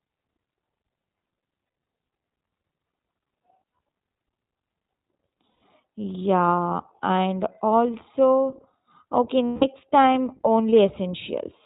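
From the start the speech carries the iLBC codec's character. Everything above 4 kHz is missing, so it sounds like a telephone line, and voiced sounds have a rough, slightly synthetic grain that is plainly audible. The grain fits iLBC's 20 ms frame mode at around 15 kbps. Unlike the smeared, watery artefacts of a transform codec, this roughness sits in the excitation itself, with no warbling tones.

Lost iLBC frames first appear between 1.66 and 1.94 s. About 180 ms of frames go missing, scattered over 280 ms, and the longest run is roughly a tenth of a second. The decoder fills each gap by repeating the last pitch cycle with added noise, so the speech turns briefly into a held, buzzy vowel rather than falling silent or clicking. It recovers almost at once. A 120 ms loss at 5.50 to 5.62 s sounds the same. A 160 ms loss just after "and also okay", from 9.47 to 9.65 s, sounds the same too. 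The instant recovery tells it apart from jitter-buffer stretching.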